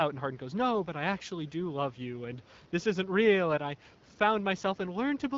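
No technical faults can be heard in the speech. The room's background noise sits about 32 dB below it, and the AMR wideband (HD Voice) codec at 12.65 kbit/s keeps the speech clear, leaving only a light trace of its coding.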